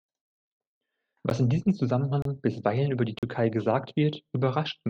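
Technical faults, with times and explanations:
1.3 s, 2.22–2.25 s and 3.19–3.23 s: block of digital silence, three times. The signal falls straight to silence and returns with no fade. At 1.3 s, just before "in diesem", the 12 ms hole is heard as a tick and fits a 512-sample buffer left unfilled. The 30 ms gap after "in diesem", before "bisweilen über die", and the 42 ms gap after "bisweilen über die" are heard as short holes.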